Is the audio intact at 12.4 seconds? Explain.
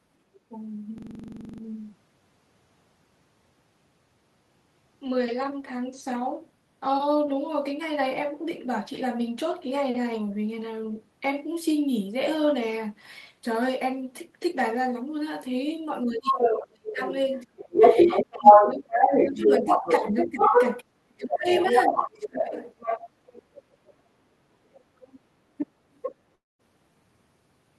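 Yes, at 12.4 seconds the speech plays through cleanly, with no dropout, click, distortion or other audible fault at that moment.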